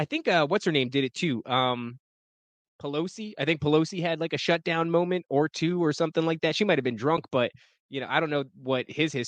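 At 7.17 s the speech briefly dips out and back in, an AAC frame loss with muting: one lost frame, about 10 ms, was zeroed and faded by overlapping windows. The speech carries light coding texture, likely from low-delay AAC compression.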